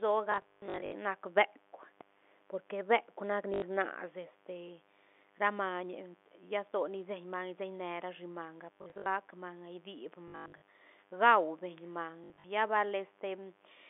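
A steady, raspy buzz runs under this speech recording from start to finish, sitting roughly 30 dB below the talker. This is mains buzz at 50 Hz: a dimmer, rectifier or poorly shielded cable is letting sharp switching spikes into the signal twice per mains cycle, so the hum carries a long chain of harmonics that climb well into the kilohertz range and give it that gritty edge. The speech is heard through a telephone-band G.711 line that passes roughly 250 Hz to 3.5 kHz. Across that band the buzz keeps its rasp rather than thinning to a low hum. The speech is also broken by short robotic stutters at 0.32 to 0.92 s, 3.54 to 3.62 s, 8.74 to 9.06 s, 10.28 to 10.68 s and 12.24 to 12.44 s. These come from packet loss with the last packet repeated. When packets went missing, the receiver kept replaying the most recent one until fresh audio arrived. The joins seldom line up with the pitch. The longer runs, up to 140 ms in the first burst, turn into a 50 Hz buzz, which fits 20 ms packets.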